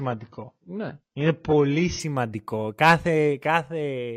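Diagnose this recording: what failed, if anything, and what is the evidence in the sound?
The opening two seconds show an adaptive stream starting at a low bitrate, a playback and network-stage issue rather than anything upstream. From 0.0 to 2.0 s the speech has nothing above about 6.5 kHz and carries heavier codec smearing, which fits an AAC stream around 16 kbit/s. At 2.0 s the top end and detail snap back with no gap. That step is consistent with a jump to something like 96 kbit/s once the player had sized up the connection.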